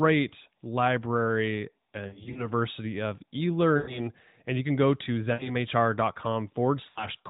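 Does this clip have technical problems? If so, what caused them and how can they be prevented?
Yes. There are lost AMR speech frames at 2.08–2.51 s, 3.78–4.00 s, 5.34–5.53 s and 6.90–7.07 s. In each, the decoder repeats the last good pitch and vocal tract settings at falling gain, so the sound smears and briefly warbles instead of cutting out. The first event holds about 140 ms of gaps scattered over 280 ms, with no run longer than 60 ms. This sustained, fading smear, not clicks or hard silences, sets it apart from plain packet dropouts. Stronger radio coverage or better channel error protection would prevent it.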